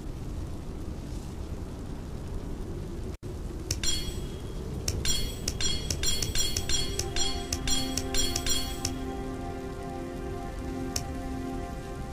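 A brief intermittent contact dropout at 3.14 s: the signal cuts out for about 73 ms with crackle at both edges, showing as a near-empty gap framed by broadband spikes on the spectrogram.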